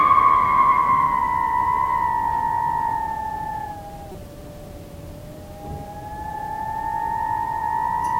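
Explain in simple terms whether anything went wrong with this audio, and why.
A corrupt frame was decoded at about 4.12 to 4.15 s. The audio travels as small compressed packages of data, and a few of them arrived with some of their bits scrambled. Instead of discarding them, the player unpacked them as if nothing were wrong, so the sound in that instant was rebuilt from bad instructions. Energy landed at the wrong pitches, and for roughly 30 milliseconds the sounds are interrupted by a short, unnatural blip or chirp.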